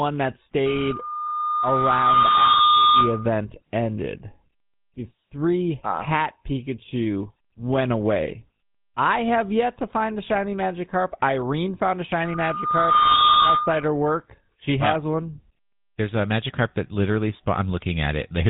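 Speech, carried through the GSM full-rate codec for its whole length. The voice has the buzzy, gravelly roughness of that codec. It models the vocal tract and excites it with a sparse, regularly spaced pulse train, so much of the natural excitation detail is lost. The damage is plainly audible, and the bandwidth stops at about 3.9 kHz, consistent with a 13 kbps full-rate GSM stream. There are also two bursts of loudspeaker feedback squeal, both a single tone at 1.2 kHz. Here a microphone is picking up the loudspeaker it feeds, and the loop gain at that frequency exceeds one. The first runs from 0.66 to 3.31 s, swelling over roughly two seconds to about 5 dB above the speech. The second starts just after "found a" at 12.25 s and lasts until 13.89 s. It climbs faster, in about a second, and peaks around 10 dB above the speech.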